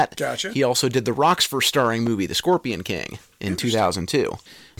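Hard clipping flattens the speech peaks from 0.00 to 0.18 s and from 0.71 to 1.88 s, overdriven by about 5 and 6 dB, producing harsh fuzz. At 2.07 to 2.09 s a single loud pop, likely a switching or static transient, sits a few dB above the speech. Brief clipping crackle follows at 2.52 s, overdriven by about 1 dB, and the fuzz returns from 3.80 to 4.15 s at about 5 dB.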